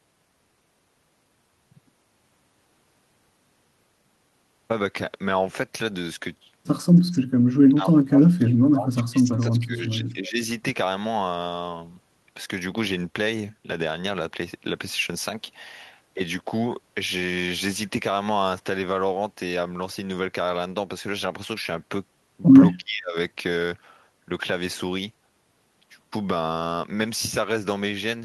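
Speech over a call link, band-limited around 12 kHz in the way Opus at a moderate bitrate would leave it, with two kinds of fault. An echo leak appears at 7.11–7.2 s and again at 9.39–9.46 s: a faint delayed copy of the speech, lagging by about 315–318 ms and sitting roughly 30 dB and 25 dB below the direct level. The likely cause is a loudspeaker echo the far-end canceller failed to remove. Speech suppressed in double talk follows at 7.32–7.39 s, 7.68–10.41 s and 22.77–23.16 s, where the talker drops in level by up to around 35 dB (around 25 dB in the last case) and breaks up. This likely comes from the echo canceller attenuating everything while both sides were active.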